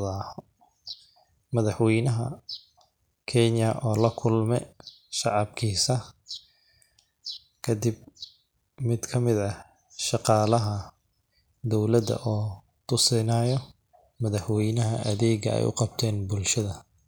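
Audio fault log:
No technical faults can be heard in the speech; the signal stays steady and continuous across the whole recording.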